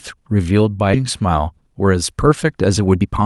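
It's a short speech clip with two glitches. At 0.93 to 0.95 s there's a skip ahead: a chunk of audio was dropped, roughly 0.7 s of it, and playback jumps straight on with no fill, so the two sides butt together almost directly. From 2.80 to 3.23 s the jitter buffer speed-up kicks in. Having built up too much backlog, the receiver snips out short pitch-period slices, roughly 150 ms in total, so the talker runs at 128% speed with pitch intact and sounds rushed. The Opus call path, band-limited to around 12 kHz, is carrying it all.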